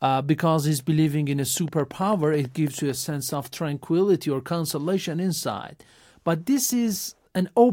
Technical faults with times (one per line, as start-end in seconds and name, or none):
1.57-2.91 train of clicks